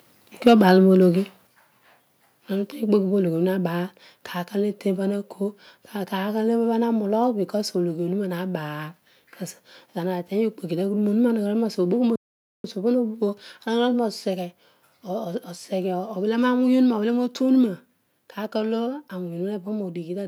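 From 0.46 to 0.71 s the speech peaks crackle harshly, running about 4 dB past the converter's limit. That's microphone overload, likely from input gain set too high. At 0.48 s and again at 1.47 s the microphone volume steps down, by about 2 dB and then about 4 dB, likely the call software reacting to the clipping. Then at 12.16 s the audio stops dead for about 484 ms before resuming at 12.64 s, a playback stall, likely the player starving for data.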